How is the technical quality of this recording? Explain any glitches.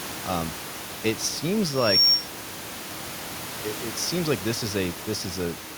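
There is one clear glitch in this speech recording, a loudspeaker feedback squeal, heard over a room noise floor that sits about 15 dB below the speech. From 1.72 s to 2.29 s a single tone at 5.5 kHz swells over roughly a third of a second to about 10 dB above the speech. The microphone picked up its own loudspeaker, and at that frequency the loop gain passed one, so the tone fed on itself. Its gradual build distinguishes it from a steady electrical whine.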